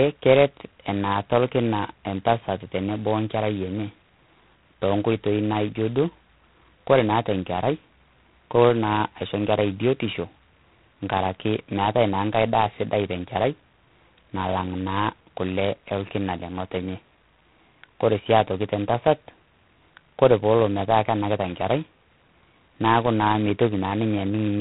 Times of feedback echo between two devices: none

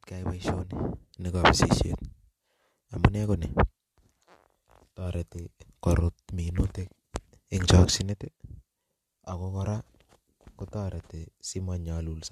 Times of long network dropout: none

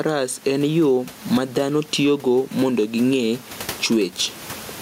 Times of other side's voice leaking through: none

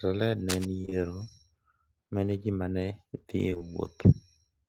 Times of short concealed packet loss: 0.81-0.93, 3.49-3.62

